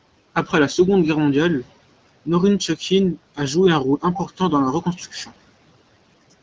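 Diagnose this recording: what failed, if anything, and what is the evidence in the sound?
Speech cut by the noise suppressor, between 4.82 and 5.31 s, at the call-processing stage. Within that stretch, around a tenth of a second of speech in total is pulled down, by about 11 dB at the deepest point, so those parts sound swallowed and faint. The suppressor's gain rule misread low-level speech energy as background and attenuated it together with the room noise, which sits about 22 dB below the speech.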